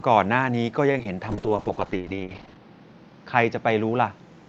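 At 0.91 s a packet arrived late and the jitter buffer ran dry, causing a short stall from a late packet. The receiver held the last speech sound for about 29 ms until the packet came, then resumed where it left off, so nothing is lost, but the sound drags briefly with a faint buzz.

Moments later, short concealed packet loss struck twice, at 0.98 s and from 1.03 to 1.06 s, each dropping about 10 ms of audio. The decoder extended the preceding sound to cover each gap before blending back, leaving a quick smear or wobble where a fragment of speech goes missing.

From 1.30 s to the end, a call bitrate drop forced the Opus encoder from 40 down to 10 kbps, holding the lowest rate for about 1.27 s. With far fewer bits, the speech is coded coarsely and turns rough and watery.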